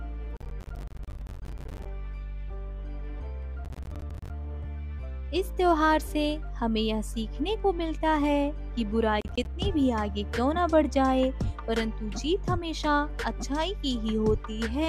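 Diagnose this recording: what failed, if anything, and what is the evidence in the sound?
Bursts of gritty crackle at 0.37–1.86, 3.65–4.30 and 9.21–9.46 s: processor overload crackle at the buffer stage, with missed buffers of roughly 10 ms dropping to silence.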